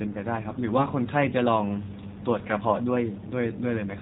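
Throughout, the speech carries G.729 codec damage. Nothing above 4 kHz survives. The voice sounds rough and synthetic, which fits an 8 kbit/s coder.

At 0.78 to 0.86 s and 2.69 to 2.74 s, VoIP packet loss concealed by the speech codec appears. A gap that sounds like one 10 ms frame is filled by extrapolation. The sound is briefly stretched into a buzzy tone or coloured noise and fades, then stays weak before recovering.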